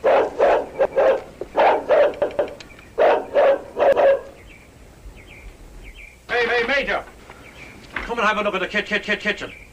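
Repeated buffer at 0.85, 2.22, 3.93, 6.49 and 8.88 s: new audio arrived late, so the device replayed its last block of about 171 ms, which fits an 8192-sample buffer. Each stutter has hard joins, doubled at 2.22 s and tripled at 8.88 s.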